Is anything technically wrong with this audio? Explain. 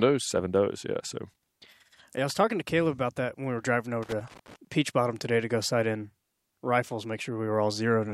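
Yes. From 4.03 to 4.56 s, just after "when we were driving", a loose connector crackle occurs: a worn contact keeps making and breaking, chopping the speech into an irregular burst of scratchy crackle.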